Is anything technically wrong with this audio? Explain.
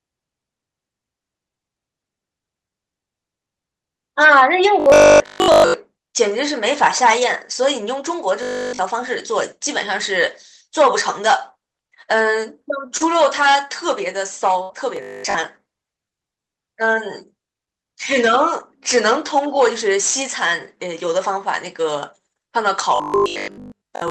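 Yes. At 4.8–5.74 s, 8.43–8.79 s, 14.97–15.35 s and 22.96–24.10 s the audio becomes a rigid, metallic 50 Hz buzz: robotic sound, likely from repeated short buffers of about 20 ms.

At 12.97–13.04 s a sound is held for an extra 32 ms, with a slight buzz or dip. This is a short stall from a late packet: the receiver stretched the last audio until the packet arrived.

At 13.01–13.07 s and 14.69–14.75 s the audio turns rougher and noisier for 60 ms each time. These are lost packets rebuilt from error correction, played from the low-bitrate copy carried in the following packet.

At 14.63–14.72 s the sound is held and fades for 64 ms, then resumes 60 ms further on. This is a burst of packet loss, with the missing stretch skipped. Throughout, the Opus call path limits the top end to about 8 kHz.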